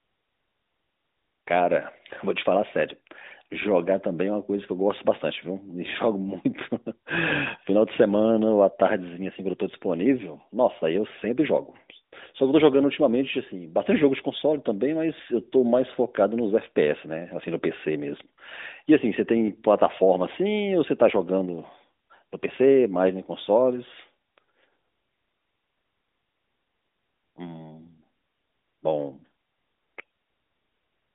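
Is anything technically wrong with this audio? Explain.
No, nothing is technically wrong with this audio.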